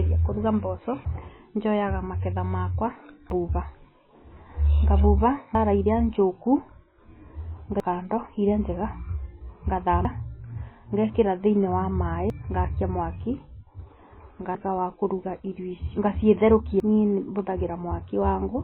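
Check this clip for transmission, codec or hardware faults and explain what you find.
Two faults are present: a heavy coding artefact over the whole clip and a run of regular skips.

MP3 compression, throughout: the speech is likely heavily MP3-encoded, and the damage points to a very low bitrate of around 18 kbps. With so few bits the encoder cuts everything above 4 kHz and drops weak frequency lines that flicker on and off between frames. The voice sounds dull and watery, with swirling on s sounds and smeared consonant onsets.

Audio missing between chunks, at 1.05, 3.3 (right after "njoyaga maketha makwa"), 5.55, 7.8 (just before "kando iria njega"), 10.05, 12.3, 14.55 (just before "wa kũruga irio") and 16.8 s: the audio was likely handled in chunks, and the evenly spaced skips fit a 2.5 s chunk length. About a third of a second is lost at each chunk boundary, and the two sides are butted together without silence. 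Each joint is heard as an abrupt jump.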